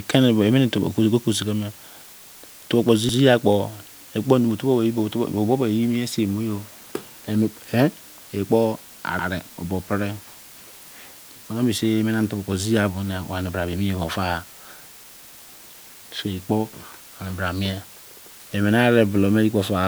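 From the start and through the whole clip runs low bit depth with dither: a constant, even hiss sitting only about 25 dB below the speech, consistent with roughly 7-bit quantisation smoothed by dither. On a spectrogram it forms a flat, uniform noise floor across all frequencies, with no harmonic distortion.

At 3.09, 9.19 and 15.29 s, overlapping chunks cause a brief stutter. Each new 6-second chunk begins 100 ms before the previous one ends, so that slice plays twice. The waveform shows a visible discontinuity and duplicated segment at each join.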